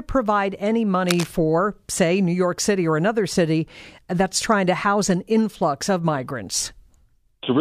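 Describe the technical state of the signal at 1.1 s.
At 1.1 s you're right at the start of a burst of cable scratch noise, running from about 1.08 to 1.26 s, just after "provide any". It's a dense, ragged crackle sitting over the speech and nearly as loud as it. The likely culprit is a worn cable, connector or control being moved, so its contact resistance jumps around rapidly and sprays uneven noise into the signal for that fraction of a second.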